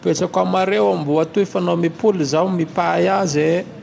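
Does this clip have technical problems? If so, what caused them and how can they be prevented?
No, there are no technical problems here: the speech carries the expected call-path band limit, with nothing above 8 kHz, consistent with a 64 kbps G.722 wideband link behind normal call microphone processing, so there is nothing to prevent.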